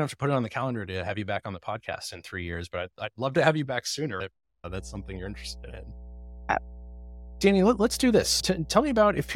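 At 4.66 s a steady 60 Hz mains hum appears and continues to the end of the speech. Power-line current is getting into the signal, probably through a ground loop or nearby transformer, adding a low, constant drone roughly 15 dB below the speech.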